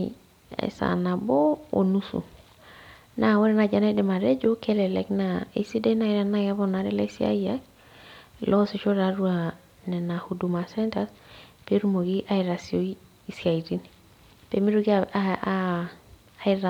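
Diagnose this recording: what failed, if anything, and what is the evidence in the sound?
Nothing failed: the sound of this recording carries no evidence of a fault at any stage.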